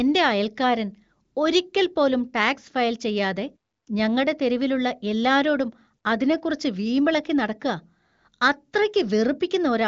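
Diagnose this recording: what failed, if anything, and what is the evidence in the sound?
Nothing has failed: the speech shows the band-limited character of an AMR wideband (HD Voice) path, with nothing above 7.5 kHz and little or no audible coding damage, which fits the codec running at a high rate of 23.05 kbit/s.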